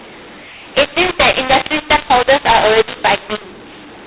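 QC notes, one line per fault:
Throughout, mu-law and A-law mixed up: the telephone audio was encoded with the A-law curve and decoded as mu-law, so each 8-bit code maps to the wrong level on the logarithmic scale. Loud and mid-level speech comes out harsh and distorted, with levels bent up or down unevenly, and the quietest samples are pushed well above silence, so the pauses carry a steady noise floor. The band stops near 4 kHz, consistent with 8 kHz G.711 sampling.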